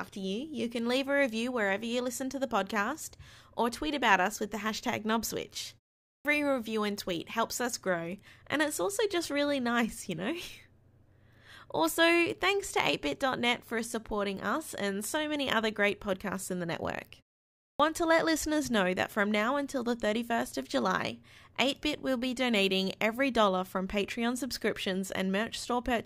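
At 6.06 s, just after "with the hashtag knobswitch", and again at 17.6 s, after "podcasts in the network", the speech shows a clipped start after a pause. The output device went idle during the short gaps (0.35 s and 0.46 s) and took about 190 ms and 196 ms to wake. The opening of each next phrase is swallowed, so the sound bursts in abruptly. On a waveform, the envelope jumps straight from flat silence to full level. A spectrogram shows a hard vertical edge where the onset should be.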